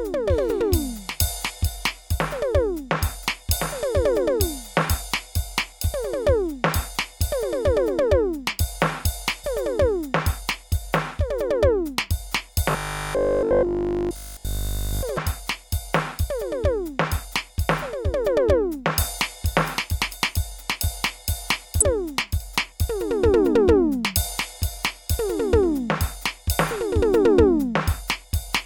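At 1.49 s the compressed stream carries damaged data: bytes are corrupt, so the decoder misreads them, loses sync and hunts for the next frame header. The music gives a brief glitch. The same damaged-data fault returns at 9.43 s as another short blip.

From 12.71 to 15.03 s new audio likely stopped arriving in time, and the player filled the gap by looping its last 20 ms block, with almost none of the real music getting through. Those repeats stamp a fixed 50 Hz pitch onto the sound, which becomes a rigid, metallic robotic buzz that only loosely tracks the music underneath.

Damaged data in the compressed stream strikes again right after, at 15.17 s, as a quick glitch. It returns for the last time from 21.81 to 21.83 s, where the decoder again loses sync and produces another brief glitch.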